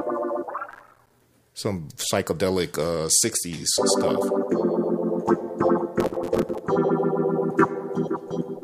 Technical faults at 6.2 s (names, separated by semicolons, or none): processor overload crackle